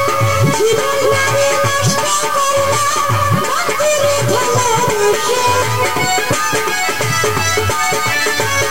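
Across the whole clip the audio has a coarse, grainy distortion that tracks the signal, with quiet passages turning gritty, consistent with low bit depth without dither, likely 5-bit truncation, leaving error only about 15 dB below the signal.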